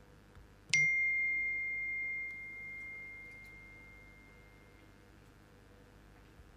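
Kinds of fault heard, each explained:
Mains buzz, throughout: a steady, raspy buzz sits under the sound from start to finish, built on a 50 Hz mains frequency. Switching circuitry such as a dimmer or rectifier, or a poorly shielded line, lets sharp spikes into the signal path twice per mains cycle. Those spikes carry a dense stack of 50 Hz harmonics reaching up into the kilohertz range, which is why it rasps rather than hums. It stays roughly 30 dB below the sound.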